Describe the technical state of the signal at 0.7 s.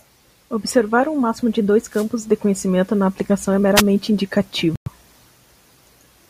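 A short burst of misplaced energy, fairly loud, cuts into the speech from 0.66 to 0.72 s. It is a corrupt frame decoded: flipped bits in a couple of compressed frames were played anyway, so misread gains and codes scattered energy across wrong frequencies.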